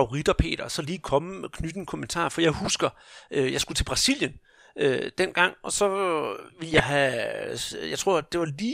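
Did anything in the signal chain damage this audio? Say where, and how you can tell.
Yes. DAB burbling at 2.65 to 2.70 s, right after "en kommentar for jeg", and at 6.66 to 6.80 s points to weak reception: bit errors slip past error correction and corrupt the MP2 audio data, so single sub-bands get short blips of noise. A spectrogram shows isolated bright, band-limited blocks.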